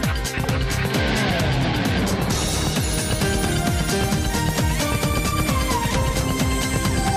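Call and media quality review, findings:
Doubled audio track from 2.91 s to end: full-band second copy trailing about a fifth of a second behind, roughly 5 dB down, dry, no decay or room colour, cutting in abruptly. Likely cause: same signal captured twice, second copy via slower path, mixed back in.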